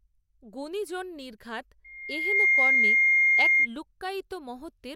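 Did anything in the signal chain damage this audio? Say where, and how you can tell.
Yes: loudspeaker feedback squeal from the microphone–loudspeaker loop after "গুণিজন নির্ঘাত", 1.84–3.68 s. A 2.1 kHz tone swells over half a second to about 15 dB above the speech, unlike steady hum.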